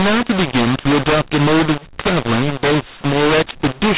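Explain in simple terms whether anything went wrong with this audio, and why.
Something did go wrong, and it lasts from start to finish. The fault is mu-law and A-law mixed up. The speech was stored in the A-law telephone format but played back as if it were mu-law. The two formats map loudness differently. So every level comes out wrong. Some parts jump too loud, others shrink. Even the quietest moments are pushed up. The speech sounds rough and distorted, and the gaps between phrases fill with noise. The narrow, phone-like sound comes from the telephone format itself.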